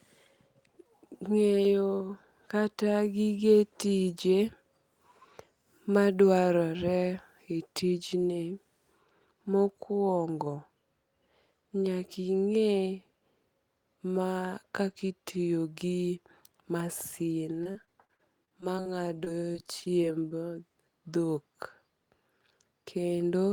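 Choppy speech appears from 17.63 to 18.95 s and again from 19.24 to 20.33 s. These are bursts of repeated packet loss (robotic sound): short holes up to 43 ms, then 23 ms, are patched by stretching the preceding sound, leaving a broken texture.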